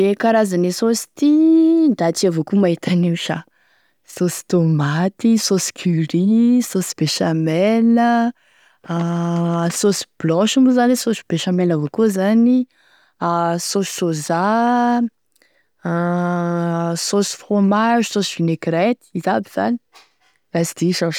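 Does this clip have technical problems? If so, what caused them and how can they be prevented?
No, the speech signal holds steady and intact throughout, with nothing that points to a fault in how it was captured, processed or delivered.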